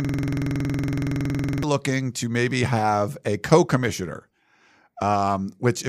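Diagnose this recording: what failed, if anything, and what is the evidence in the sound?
A rattling 21.5 Hz buzz runs from the start to 1.63 s: a system hang loop, the frozen driver replaying one 46 ms ring buffer.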